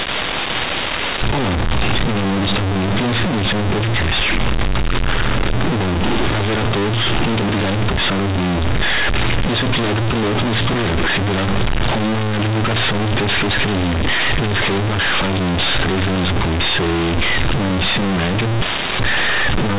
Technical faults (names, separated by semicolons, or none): companded audio read as linear